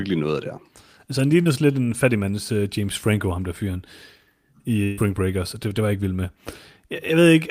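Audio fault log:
1.41–1.47 s, short concealed packet loss: about 40 ms of speech arrived too late, just before "lidt en fattig mands". The receiver bridged the hole by extending the preceding sound, so there is a brief smear.
4.83–4.99 s, burst of packet loss: about 140 ms was lost in a row. The decoder stretched the last sound across it and faded it instead of going silent, giving a held, dimming buzz or hiss. The waveform shows a decaying envelope, then a jump into later speech.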